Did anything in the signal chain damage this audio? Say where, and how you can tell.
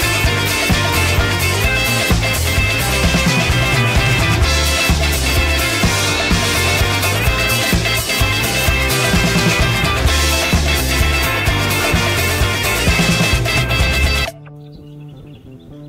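No, nothing in the chain seems to have done this audio any harm, so there's no stage to point a finger at.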